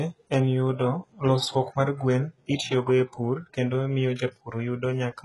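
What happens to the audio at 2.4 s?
At 2.4 s the speech carries HE-AAC compression, present across the whole clip. The treble is likely rebuilt by copying lower bands upward under a coarse envelope. Its harmonics don't align, so sibilants sound gritty and metallic. The damage is heavy, fitting about 12 kbps, and nothing sounds above 11.5 kHz.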